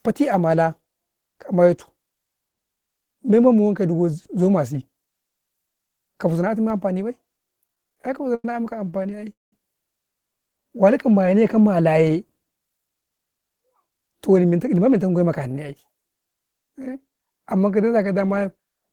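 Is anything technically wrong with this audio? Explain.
Yes. The speech has four kinds of fault, all between about 6.7 and 14.5 s.

A DC step begins at 6.7 s, right after "ka huzau na tun", and holds until 12.07 s. The waveform's zero line jumps to an offset. Each jump is heard as a low thump or click. The speech itself carries on unchanged.

Repeated stalls (stutter) occur from 7.67 to 8.45 s and from 8.85 to 9.53 s. Packets arrived late, so the jitter buffer kept running dry. The receiver stretched the last sound to cover each wait. The first stretch has 12 short gaps, none longer than 90 ms, filling 206 ms, about 27% of that span. The second has 9 gaps filling 281 ms, about 41%, and the longest lasts 199 ms. Nothing is lost, but the speech drags and stutters.

A jitter buffer slow-down runs from 10.58 to 10.86 s. The buffer was low or had just raised its target delay, so the receiver repeated single pitch periods to rebuild its reserve. 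This added 51 ms and slowed that stretch to 85% speed at unchanged pitch, drawing the sounds out.

A jitter buffer speed-up runs from 12.69 to 14.53 s, ending just before "ma men tau man". Too much audio had built up, so the receiver cut out short pitch-period pieces, roughly a fifth of a second in total. The speech runs at 109% speed with the same pitch and sounds hurried.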